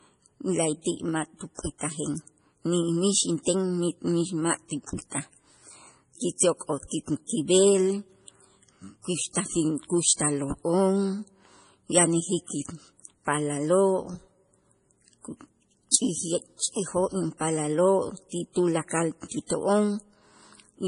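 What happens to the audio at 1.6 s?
A brief hiss from 1.55 to 1.59 s, about 41 ms, just after "la'ayti' ma'", smears the next attack. This pre-echo comes from codec noise sized for the loud onset spreading into the quiet moment before it. The sound is also dull and watery, likely from heavy MP3 compression at a low bitrate, which fits roughly 32 kbps.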